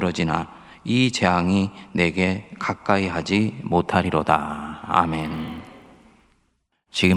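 From 5.2 s to 7.17 s, a steady 50 Hz buzz sits on the speech and is present only while there is sound. The resampler restarted on every block: each 20 ms block was converted alone, so every block edge carries a small error.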